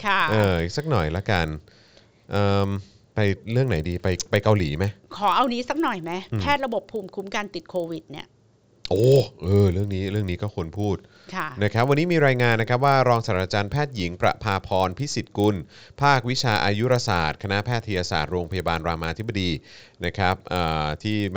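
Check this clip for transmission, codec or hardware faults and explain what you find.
One fault runs through the whole speech clip: the resampler restarted on every block. Each 40 ms block was converted separately, in what points to a 16 kHz to 48 kHz step. At every block edge the filter lacked the real neighbouring samples, leaving a small error there. The result is a 25 Hz buzz riding under the speech, present only while sound is present. On a spectrogram it shows as faint vertical lines every 40 ms. The waveform shows small steps at the same spacing.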